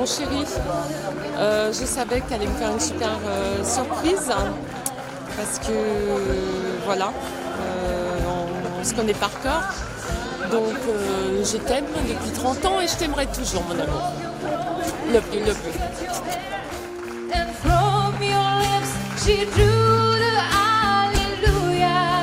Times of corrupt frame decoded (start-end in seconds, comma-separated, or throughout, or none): 14.15-14.18, 18.13-18.16, 19.98, 21.15-21.18